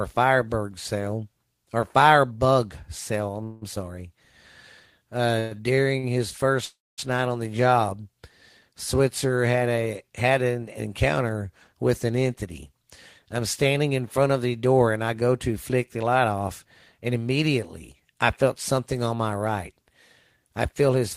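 At 3.31–3.35 s, just after "cell or fire bug", a short stall from a late packet holds the preceding sound for an extra 20 ms. The jitter buffer briefly ran dry and the receiver stretched what it had, so nothing is lost, but the sound lingers slightly too long.

At 3.43–3.63 s a call audio freeze follows. The last sound is continued as a fading buzz for 180 ms without reaching silence. A second freeze at 6.65–7.00 s, ending just before "night on the", fills 326 ms, of which about 230 ms decays into silence. Both are likely due to packets held up in transit. Playback resumes where it stopped, inserting a gap rather than dropping audio.

Between 5.39 and 6.05 s there are repeated stalls (stutter). The buffer emptied three times as packets arrived late, adding 177 ms of filled sound, with the longest gap 116 ms. About 27% of that span is concealment, so the audio drags and catches.

From 14.65 to 18.02 s, between "in front of the" and "I felt something on", jitter buffer speed-up plays the audio at 107% speed. 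The receiver trimmed short pitch-period pieces to shed roughly a fifth of a second of excess delay, so delivery sounds hurried at unchanged pitch. A briefer burst at 20.73–21.04 s runs at 111% and removes a few hundredths of a second.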